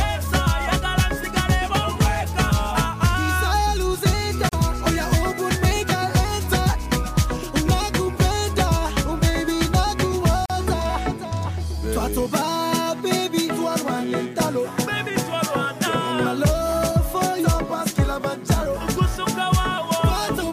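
Two short silences cut into otherwise continuous audio, at 4.49 to 4.53 s and 10.46 to 10.50 s, each about 40 ms. They are gaps at joins of encoded pieces: separately encoded segments were spliced without trimming encoder delay and final-frame padding. The smeared edges and sound resuming exactly where it stopped distinguish them from dropouts that lose material.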